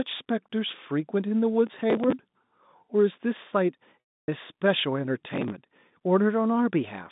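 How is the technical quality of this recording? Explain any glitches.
The recording has three glitches on top of a narrow telephone-band sound that comes from G.711 coding.

Processor overload crackle hits at 1.67 to 2.13 s and again at 5.28 to 5.52 s. The processor kept missing buffer deadlines, which fits buffers of around 5 ms, and replayed stale audio with hard edges. You hear gritty tearing.

Packet loss with pitch repetition runs from 4.00 to 4.28 s. About 280 ms went missing, the last pitch period was repeated and faded out, and the sound dips toward silence before cross-fading back.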